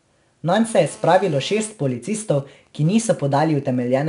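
Throughout, 4-bit ADPCM compression leaves a gritty, level-following hiss on the speech. A spectrogram shows broadband noise under each loud syllable and an empty band above 10.6 kHz, which fits a sample rate near 21 kHz.

From 0.68 to 1.70 s, GSM phone buzz from a nearby handset in a call adds a hard 217 Hz rasp about 24 dB below the speech. It shows as evenly spaced horizontal harmonic lines.

From 1.71 to 3.99 s, the handset's talker falls silent and GSM signalling bursts take over: even ticks with a longer 217 Hz buzz twice a second, roughly 30 dB down. They appear as evenly spaced vertical stripes in the spectrogram.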